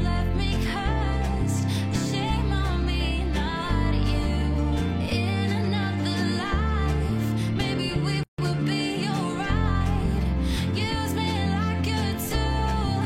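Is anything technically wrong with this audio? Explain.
Yes. At 8.23 to 8.38 s there is a gap at a join of encoded pieces. Separately encoded segments were spliced without trimming the encoder's start delay and end padding, leaving a 151 ms gap with smeared edges before the sound resumes where it stopped.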